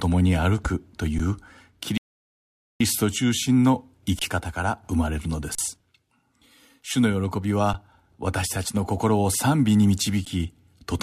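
At 1.18 s, an underrun with held sample: the waveform freezes flat for about 12 ms, then resumes as roughly 10 ms of audio is lost. From 1.98 to 2.81 s, a rebuffering stall cuts the speech to silence. It resumes exactly where it stopped, adding about 0.83 s. Further held-sample underruns follow at 4.19 to 4.21 s, 5.55 to 5.58 s, 7.73 s and 10.25 s. The 12 ms and 23 ms gaps fit 512- and 1024-sample buffers.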